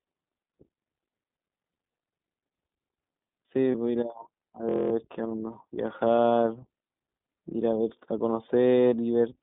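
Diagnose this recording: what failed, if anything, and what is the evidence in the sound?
Codec stage: the whole clip passes through the iLBC codec. Speech is confined to about 200 Hz to 3.6 kHz and sounds rough and synthetic, which fits 15.2 kbps. A simple band-limited line would sound dull but not synthetic.

Network stage: lost iLBC frames at 3.72 s and 6.16 s, each about 20 ms. Each gap becomes a brief buzzy held vowel rather than silence, then recovers at once, with no lingering smear afterwards.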